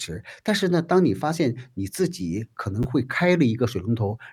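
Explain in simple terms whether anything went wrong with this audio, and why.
Chunks out of order at 2.83 to 2.85 s: one 10 ms slice of speech arrived late and played after the next one, causing a brief jumbled moment.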